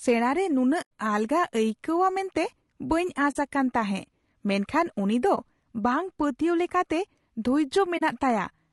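Low-delay AAC compression runs through the whole clip. The speech is rough and grainy, with noise filling the gaps between harmonics and a thin, synthetic-sounding top band. This is likely the short-frame AAC-ELD coder starved of bits, which fits about 32 kbps.

AAC frame loss with muting appears at 0.81–0.91 s, 3.31–3.36 s, 5.35–5.38 s and 7.97–8.02 s. In each, the decoder zeroed the missing spectrum, so the overlapping windows fade the sound out and back. The holes run about 100, 40, 20 and 40 ms.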